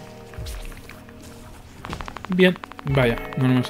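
A train of clicks starts at 1.85 s and continues to the end at 3.69 s. Sharp pulses of nearly identical shape arrive at a steady 12.8 per second. Each peaks about 10 dB above the surrounding sound, so the pulses stand clearly on top of it as an even, rapid ticking. The regular pacing points to a periodic disturbance outside the sound itself, likely interference from nearby equipment or a faulty connection or power supply.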